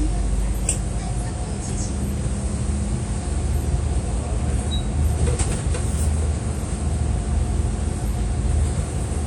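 Throughout the clip, the audio was likely squeezed through a low-bitrate WMA compression encoder, consistent with roughly 48 kbps. Its long transform blocks smear quantisation noise in time, so the sound rings and washes, with a hiss that breathes alongside it and nothing above 17.6 kHz.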